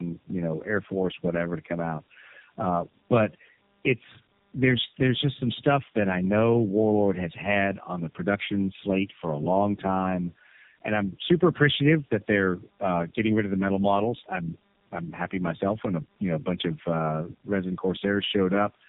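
Rough, muffled and warbly speech runs throughout, with nothing above 3.8 kHz. This is tandem speech coding: the sound points to three low-rate narrowband speech codecs in a row, each re-encoding the previous one's decoded output, so their losses compound.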